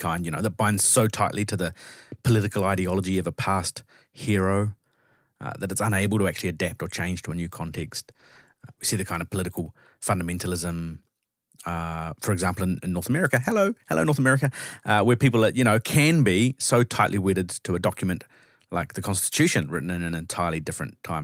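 Right after "change to a new", from 7.75 to 9.65 s, the speech turns rough and coarse, at its worst for about 1.1 s before clearing. This is a call bitrate drop: the bandwidth estimate fell, forcing the encoder from 32 to 16 kbps.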